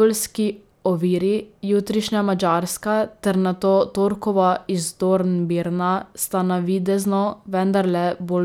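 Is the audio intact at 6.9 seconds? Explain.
Yes, at 6.9 seconds the speech plays through intact, with no dropout, click, distortion or other fault at that moment.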